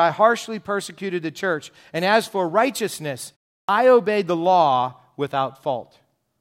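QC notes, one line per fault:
3.65–3.69 s, clipped start after a pause: after "as for righteousness" the output sits silent for about 0.37 s, and the playback device drops into an idle state. When sound resumes it takes roughly 36 ms to wake and relock, so the leading edge is swallowed and "obeyed the law" bursts in abruptly from silence with its first sound cut.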